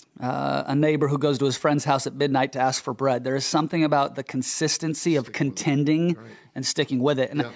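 No technical faults occur anywhere in this speech; the low bass trimmed and the absence of anything above 8 kHz are the normal result of call microphone processing.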